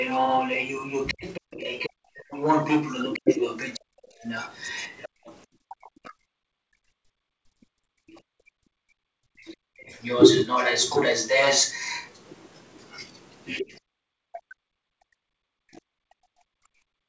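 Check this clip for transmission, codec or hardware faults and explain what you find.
Three faults stand out, all tied to the echo canceller on the talker's side of the call.

Other side's voice leaking through, 0.0 to 15.81 s: a second voice runs underneath, roughly as loud as the talker, likely because loudspeaker playback reached the microphone uncancelled.

Speech suppressed in double talk, 1.14 to 10.01 s and 13.6 s to the end: the talker's voice dips, by around 40 dB at worst, for about a second in the first stretch, likely as both sides overlap and the canceller turns everything down.

Background gated by the echo canceller, 5.09 to 8.11 s and 14.41 to 14.47 s: the room sound drops out by about 40 dB, for roughly two seconds in total in the first span, then briefly, by about 39 dB, in the second. The canceller clamps the microphone while the loudspeaker plays.

Across the clip, the G.722 call path at 64 kbps leaves nothing above 8 kHz, as expected for that codec.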